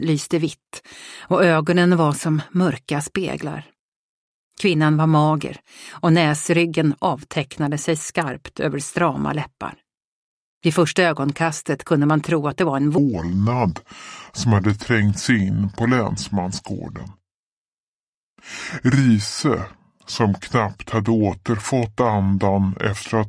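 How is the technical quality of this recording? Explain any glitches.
The recording has one clear fault in its second half. From 12.98 s to the end, there is a wrong sample rate. The audio plays at 0.689 times its proper speed, which fits 32 kHz material played back at 22 kHz. Pitch drops about 6.5 semitones. The sound turns low, slow and dragging.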